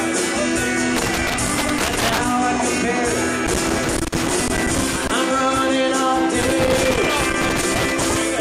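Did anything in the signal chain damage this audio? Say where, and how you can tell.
Yes. The damage is in the analogue wiring: loose connector crackle appears in three separate bursts, from 0.97 to 2.25 s, 3.47 to 5.11 s and 6.42 to 8.22 s, each an irregular spray of scratching and crackle over the sound. A worn or dirty contact is making and breaking as it shifts, chopping the signal into fragments and adding pops wherever DC sits on the line.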